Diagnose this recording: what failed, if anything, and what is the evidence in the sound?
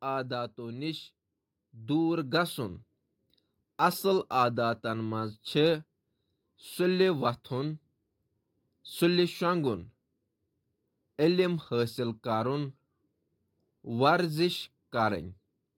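The call processing stage shows automatic gain rising: from 0.56 s to 5.49 s the speech and the background noise swell together by about 8 dB. The gain control judged the input too quiet and raised its gain slowly over those five seconds.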